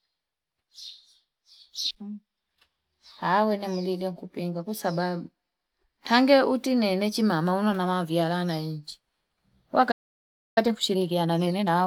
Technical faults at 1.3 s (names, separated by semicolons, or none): none